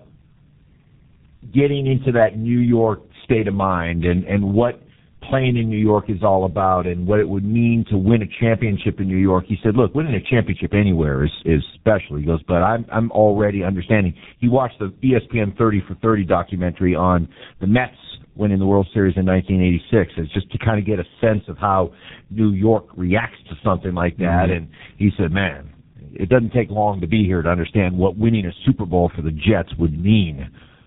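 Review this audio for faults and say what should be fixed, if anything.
Throughout the clip, the speech sounds rough, muffled and warbly, with nothing above 3.8 kHz. That's tandem speech coding. The signal was squeezed by one low-rate speech codec, decoded, then coded again by a second, which fits GSM full rate followed by G.723.1. The second coder worked on the first one's already damaged output, so the artefacts stack.

To prevent it, keep the call in a single codec end to end, or use transcoder-free operation so the coded stream isn't decoded and re-coded at each link.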